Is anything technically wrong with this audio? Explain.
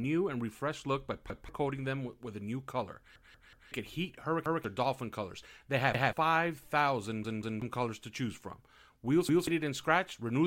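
Yes. Repeated buffer: playback ran dry six times, so the device replayed its last chunk of roughly 186 ms, which fits an 8192-sample buffer. The speech stutters with a hard join at each repeat, and the audio that should have played there is lost. This happens at 1.30–1.49 s, 3.16–3.72 s (played four times), 4.46–4.64 s, 5.94–6.13 s, 7.25–7.62 s (played three times) and 9.29–9.47 s.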